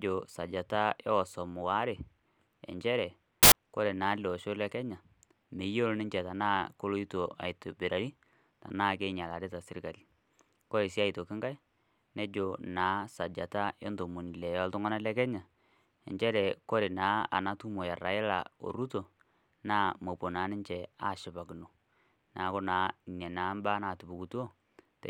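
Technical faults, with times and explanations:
3.43 to 3.52 s, samples built from the wrong bytes: for roughly 90 ms the speech is replaced by a harsh burst of loud broadband noise, because each sample was reassembled with its bytes misordered or misaligned, so the rapidly changing low bits landed in the high-order position. On a waveform the signal jumps to large, dense hash; on a spectrogram it shows as a solid broadband block from the bottom to the top of the frequency range.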